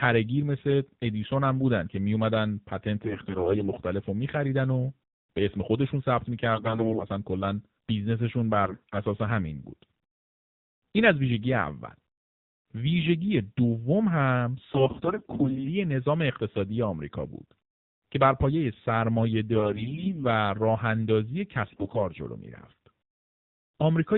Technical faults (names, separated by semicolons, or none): AMR narrowband mobile codec; AMR bit errors